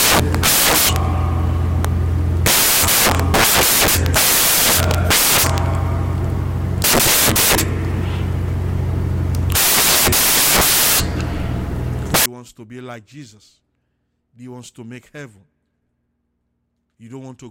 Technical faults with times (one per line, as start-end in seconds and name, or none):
0.00-12.26 samples built from the wrong bytes